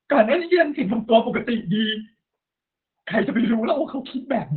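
From start to finish the speech sounds muffled, hoarse and faintly robotic, with everything above about 4 kHz gone, leaving a thin telephone-like tone. This is heavy Opus voice compression working in its SILK linear-prediction mode at narrowband. The coder models the vocal tract in 20 ms frames and spends so few bits on the excitation signal that its roughness replaces natural breath and texture, which fits a bitrate of around 8 kbps.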